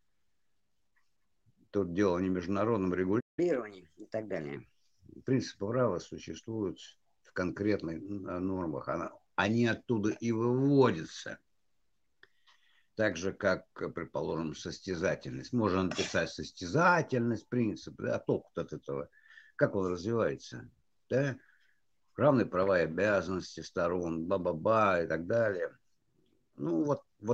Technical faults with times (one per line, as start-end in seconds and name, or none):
3.20-3.39 playback stall
3.39-4.56 catch-up at higher speed